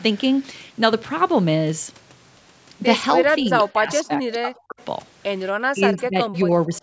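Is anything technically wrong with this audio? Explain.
Yes. The speech shows two related call-processing faults in its second half.

Speech suppressed in double talk occurs from 3.38 to 4.24 s, 4.42 to 4.81 s and 5.72 to 6.82 s. The speech level dips by roughly 25 dB, then 40 dB, then 20 dB. This is likely an echo canceller that could not tell this talker from loudspeaker echo while the far side was also speaking, so it attenuated everything.

Echo leak appears as brief scraps at 3.68 to 3.73 s, 5.98 to 6.03 s, 6.34 to 6.38 s and 6.73 to 6.78 s. A faint copy of the speech returns 237 ms late, about 25 to 35 dB below the speech. The likely cause is a loudspeaker-side echo canceller that did not fully remove what its microphone picked up and sent that residue back.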